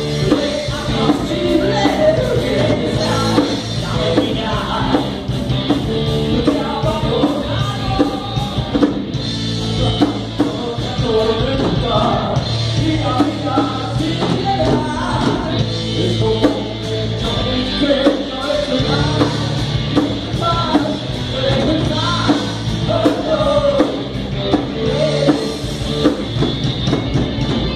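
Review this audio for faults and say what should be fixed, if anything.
Nothing stood out on listening, so there is nothing here that needs fixing.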